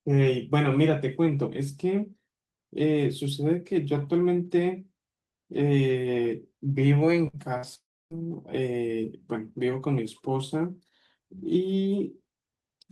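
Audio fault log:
7.27–7.36 s and 7.57–7.66 s, burst of packet loss: about 60 ms lost each time, filled by the receiver extending the last sound into a fading buzz or hiss before audio resumes.
7.75–8.14 s, long network dropout: the last sound is carried on and fades, then about 290 ms of silence; likely several hundred milliseconds of audio never arrived.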